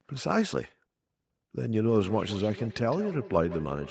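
From 1.83 s to the end, a feedback echo between two devices returns the speech roughly every 150 ms, thinner and ringing, about 15 dB down; spectrograms show evenly spaced fading copies.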